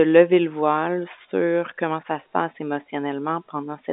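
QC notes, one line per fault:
No faults heard; telephone-band speech throughout.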